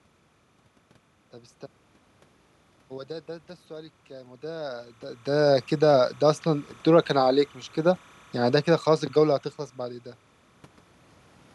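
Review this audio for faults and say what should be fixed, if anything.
Timecode bleed runs throughout the clip as a faint chirping warble roughly 35 dB below the speech. It flips between tones near 1 kHz and 2 kHz, a code running at 29.97 frames per second. Unlike hum, it warbles rhythmically. Separate and shield timecode lines from the audio cabling.

Automatic gain rising occurs from 3.07 s to 6.74 s. The gain control lifts the level by about 6 dB, so the speech and the room noise swell together. That shared rise sets it apart from the talker moving near 4.5 s, which changes only the voice. Use fixed manual gain.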